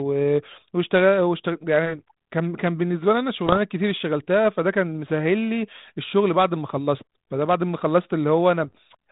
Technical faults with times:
3.46-3.57 bit errors on an ADPCM link
8.64-8.78 bit errors on an ADPCM link

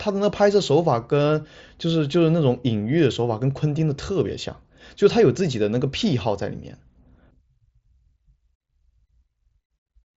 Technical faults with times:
none

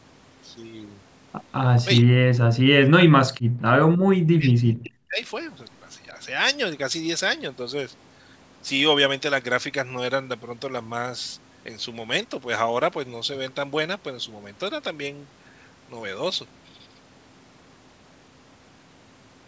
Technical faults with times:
2.01-3.95 speech suppressed in double talk
4.31-5.21 speech suppressed in double talk

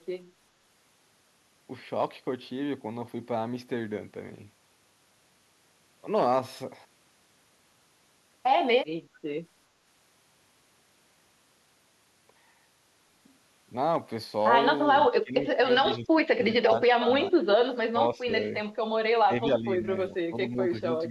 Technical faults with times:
15.07-15.66 speech suppressed in double talk
15.96-18.54 speech suppressed in double talk
19.26-21.10 speech suppressed in double talk

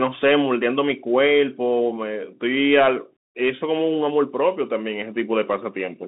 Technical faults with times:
0.00-6.08 Bluetooth CVSD headset codec

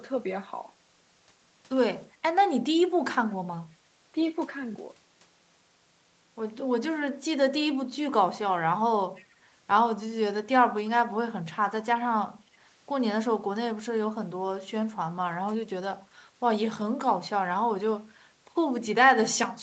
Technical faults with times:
7.77-7.83 speech suppressed in double talk
9.16-9.25 echo leak
16.10-16.15 speech suppressed in double talk

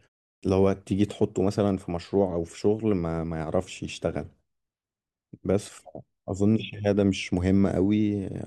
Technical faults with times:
0.39-0.43 clipped start after a pause

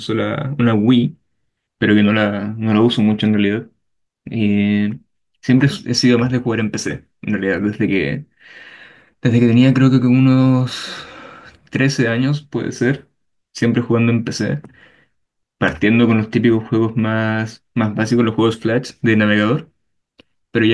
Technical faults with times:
none

